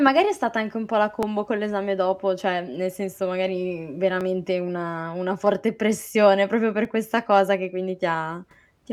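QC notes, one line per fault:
1.23 s, 4.21 s and 6.85 s: dropped samples. Each is a single sharp click, a thin vertical line in the spectrum. The first falls after "anche un pò la", the second after "mhmm nel senso magari" and before "una una forte pressione", the third just before "questa cosa che". The likely cause is that well under a millisecond of the stream went missing, so the waveform jumps abruptly to a later value. The gap is too brief to remove any audible sound.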